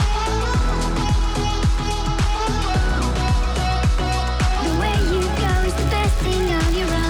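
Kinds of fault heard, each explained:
Filter restarted on every block, from 4.67 s to the end: the filter loses its stored state at each block boundary, so every block starts from silence and opens with a small transient instead of carrying on smoothly from the previous block. These transients repeat at 86.1 Hz, which fits a 512-sample block, and are heard as a steady buzz on the sound that gets louder and softer with the signal's level.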